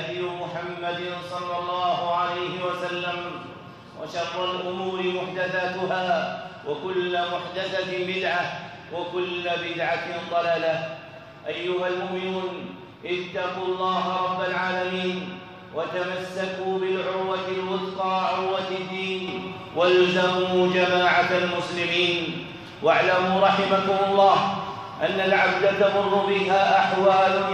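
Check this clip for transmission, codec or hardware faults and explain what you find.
One fault is present. At 19.28 s a sudden gain jump raises everything by about 6 dB until the end. It is likely an unramped digital gain change. Sound and background noise rise together.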